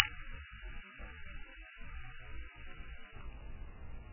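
Music carrying heavy MP3 compression throughout, likely from a very low bitrate around 8 kbps: watery, swirly smearing, with a spectrogram showing nothing above 3 kHz and flickering gaps below.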